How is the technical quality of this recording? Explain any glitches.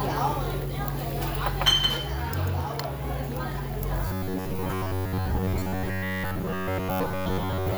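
The second half is marred by robotic sound from repeated short buffers. From 4.07 to 7.77 s, a rigid, metallic 93.8 Hz buzz sets in, likely from roughly 10.7 ms chunks being looped while most real audio is skipped. A spectrogram would show evenly spaced horizontal harmonic lines every 93.8 Hz, and the waveform identical repeating cycles.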